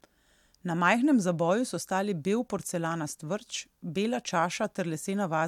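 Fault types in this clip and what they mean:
Block of digital silence: At 2.58 s, just after "zaboju so stali bel", the speech cuts to silence for 5.8 ms and returns with no fade. The gap is short enough to be heard as a tick or dip rather than as silence. Its length fits a 256-sample block.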